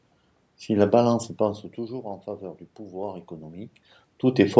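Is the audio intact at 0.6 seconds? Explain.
Yes, the speech at 0.6 seconds is intact, with no technical fault at that moment.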